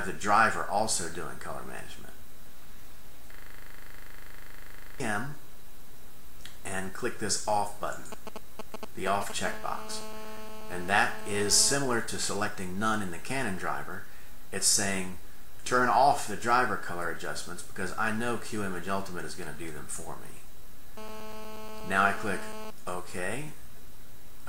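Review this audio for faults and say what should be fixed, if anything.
From 3.34 to 5.0 s, a 40 ms fragment repeats over and over at 25 Hz, giving a rattling, machine-gun stutter. This is a system hang loop: the computer or driver stalled while the sound hardware kept replaying the same ring buffer, which fits a 40 ms buffer cycling about forty times. Fix the driver or system stall and have playback mute when the buffer stops being refilled.

Between 8.12 and 9.32 s, a galloping dit-dit-dit of short raspy 217 Hz buzzes appears, around 10 dB below the signal. These are GSM signalling bursts: a nearby 2G phone was exchanging short radio bursts with the network, and the audio circuit rectified them into audible pulses. Keep phones away from the equipment and cabling, or switch them off.

From 9.45 to 11.75 s, and again from 20.97 to 22.71 s, a hard, steady buzz at 217 Hz with dense harmonics runs under the audio, about 15 dB and about 14 dB below the signal. 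This is GSM phone buzz: a 2G phone in an active call transmitted 217 bursts per second, which the audio wiring picked up and demodulated. Use shielded, balanced connections and keep phones well clear of the signal path.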